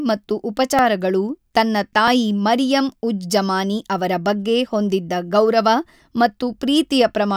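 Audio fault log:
0.79 s and 2.08 s, repeated buffer: each is a click or brief buzz rather than an audible stutter. A tiny slice of sound, about 1.45 ms long, plays again with a hard edge at every join. It repeats twice more at 0.79 s and once more at 2.08 s. That length fits a 64-sample buffer. New audio arrived late, so the device replayed its last block. No sound seems to be lost.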